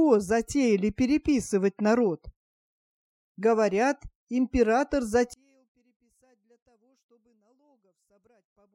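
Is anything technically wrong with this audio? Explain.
Yes. From 5.34 s to the end, the sound drops by about 40 dB and all but vanishes. What remains is faint. This is consistent with one channel inverted. The likely cause is that one stereo channel has reversed polarity. When the two channels are summed to mono, everything common to both cancels. Centred material disappears. Only the small difference between the channels survives, which is why so little is left.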